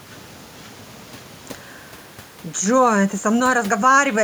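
Speech, with no technical faults to be heard.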